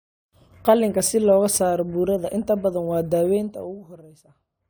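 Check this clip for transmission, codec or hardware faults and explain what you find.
No transmission, codec or hardware fault can be heard in the speech. Where the level is brought down or up, it moves gradually, as a fader would, with no steps or jumps.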